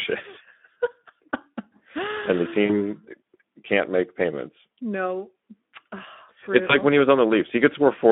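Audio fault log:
throughout: Speex codec, hoarse, noisy speech band-limited to 200 Hz to 3.5 kHz, a spectrogram with nothing above 3.5 kHz, fitting a low rate near 11 kbps.
2.65–2.78 s, 4.78 s, 6.67–6.76 s: VoIP packet loss concealed by the speech codec. After "and the" and "can't make payments", and before "when he was", 40, 40 and 20 ms of audio go missing. The decoder stretches the last sound into a fading buzzy tone or coloured noise, seen as a smeared spectrum and a sagging envelope.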